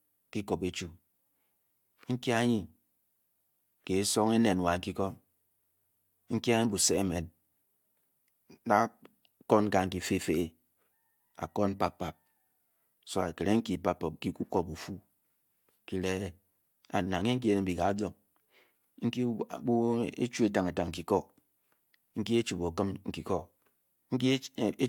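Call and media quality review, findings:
No faults found in review.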